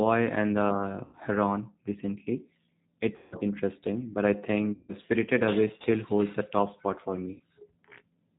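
From start to end the speech carries plainly audible G.729 codec damage, at 8 kbit/s. The codec rebuilds the voice from a filter, a pitch predictor and a few pulses per frame. Nothing above 4 kHz survives, so the sound is dull, rough and slightly synthetic.

At 1.05 to 1.17 s, 3.16 to 3.36 s, 4.73 to 4.95 s and 7.34 to 7.42 s, there is VoIP packet loss concealed by the speech codec. About 80, 160, 160 and 60 ms of audio go missing. The decoder stretches its last pitch and filter into a buzzy tone or coloured noise that fades. The voice stays weak briefly after each gap.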